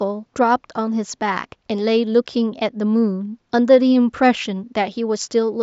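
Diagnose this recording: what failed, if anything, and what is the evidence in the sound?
Nothing has gone wrong here; all you hear besides the speech is a faint room noise sitting about 52 dB below it, which belongs to the space the microphone was in rather than to anything in the chain.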